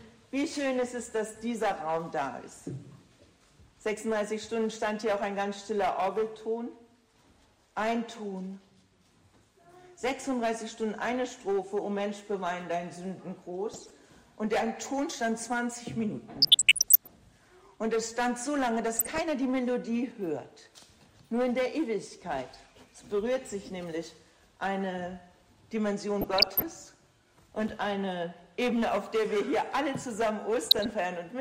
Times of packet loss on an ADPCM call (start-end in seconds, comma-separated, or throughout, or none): none